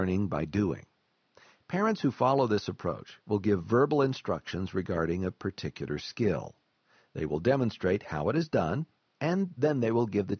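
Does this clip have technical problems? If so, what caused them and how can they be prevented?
No, the signal shows no technical faults; it has passed through a call's microphone processing, which trims the lowest bass and leaves nothing above 8 kHz, as that path normally does.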